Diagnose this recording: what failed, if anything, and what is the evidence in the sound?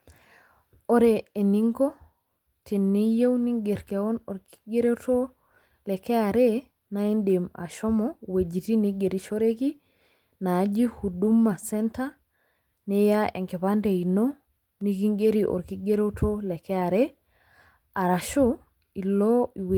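Driver or buffer stage: a block of digital silence at 14.81 s, a 1.45 ms hard-edged cut to zero heard as one tick rather than a smeared, concealed dropout, fits a 64-sample buffer left unfilled.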